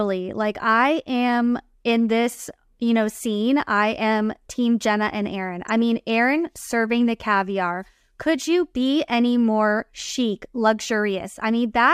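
A corrupt frame decoded at 5.68 s breaks into this speech recording as a brief chirp-like blip, lasting only a moment. The compressed data for what sounds like a couple of frames was damaged, yet the decoder played it rather than concealing it, so misread gains and spectral codes scattered energy into the wrong frequency bands for roughly a frame's length. The stray burst peaks somewhere around -25 dBFS.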